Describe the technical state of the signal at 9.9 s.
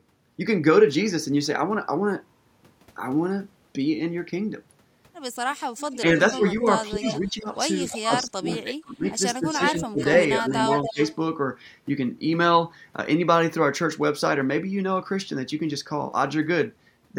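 At 9.9 s the speech is being suppressed in double talk. This runs from 6.02 to 11.0 s, about two seconds of it audibly affected. The level dips by as much as 20 dB or so. The likely cause is an echo canceller mistaking overlapping talk for echo and attenuating both.

An echo leak overlaps it, from 9.67 to 11.15 s. A copy of the speech returns 290 ms late, only about 5 dB below the direct sound. This is likely residual loudspeaker pickup that the far side's canceller failed to remove.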